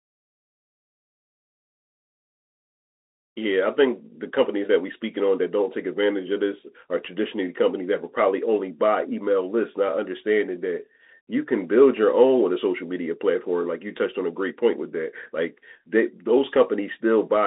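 From start to finish the speech passes through a Bluetooth CVSD headset codec: nothing above 3.8 kHz, a 250 Hz to 3.7 kHz band, plus the scratchy sibilants and granular hiss of one-bit slope tracking, which fits a 64 kbps CVSD link and sets it apart from clean telephone band-limiting.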